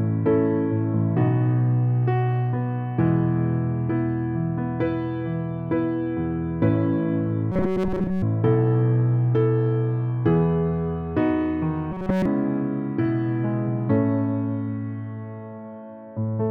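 Robotic sound from repeated short buffers appears from 7.52 to 8.23 s and again from 11.92 to 12.26 s. Both passages take on a rigid, metallic buzz at 188 Hz. The likely cause is audio arriving too late, so the same stretch of roughly 5.3 ms was looped in place of the missing material. In the first passage most of the sound is replaced by the repeats. In the second, the repeats replace the sound entirely.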